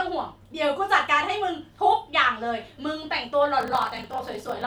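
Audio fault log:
3.58–4.67 s, block size mismatch (padded): zero gaps after what sounds like 1024-sample blocks buzz at 41.7 Hz and slow the speech to 0.889×, yet timbre holds, unlike a sample-rate error.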